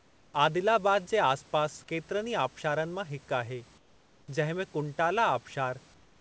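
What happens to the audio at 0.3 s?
At 0.3 s the clip is still inside a span of comfort noise in place of the background, running from 0.00 to 0.34 s: the room ambience is a steady, featureless hiss about 6 dB quieter, likely synthesized by the receiver while the sender's discontinuous transmission paused.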